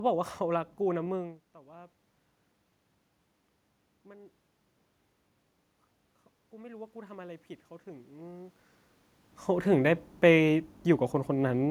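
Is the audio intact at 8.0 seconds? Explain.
No. From 6.51 to 8.63 s the automatic gain is rising: the gain control judged the input too quiet and kept turning it up, by about 6 dB over those two seconds. At 8.0 s the speech and the room noise are both still swelling in level together.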